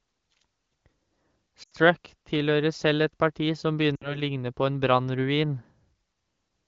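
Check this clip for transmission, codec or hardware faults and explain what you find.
Two brief dropouts from lost AMR speech frames break up this clear HD Voice (AMR-WB) speech, at 1.63–1.70 s and 3.96–4.21 s. Each is a sagging stretch that drops to near silence before the voice returns roughly. Frames failed their checksum, so the decoder repeated the last good pitch and vocal tract settings at falling gain, concealing about 80 ms and 60 ms.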